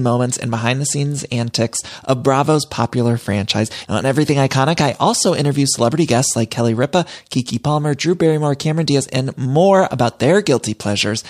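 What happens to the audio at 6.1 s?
Nothing goes wrong at 6.1 s; the speech carries straight through that point without a dropout, click or other disturbance.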